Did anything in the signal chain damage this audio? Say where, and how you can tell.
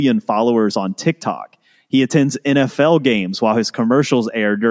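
No, no stage of the signal chain has left audible damage on this speech recording. Nowhere in it does any part of the path from capture to playback give itself away.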